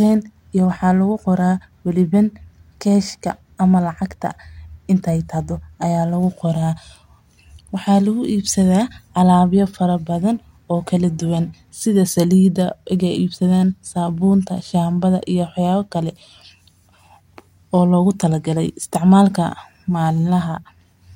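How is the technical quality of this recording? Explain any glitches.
No glitches or faults heard.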